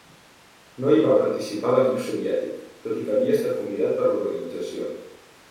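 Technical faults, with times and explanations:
No technical faults can be heard in this speech recording. There is nothing here to time or explain.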